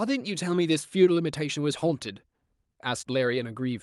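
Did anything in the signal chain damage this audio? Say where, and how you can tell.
Yes. The damage is at the network stage: a short concealed packet loss at 3.01–3.05 s. About 20 ms of the call failed to reach the decoder in time. The receiver covered the gap by extending the preceding sound and then blending back into the real signal, so the spot sounds like a brief smear or wobble rather than a hole. A plain dropout would leave silence or a hard click instead. The Opus coding around it, band-limited near 12 kHz, is the ordinary call path.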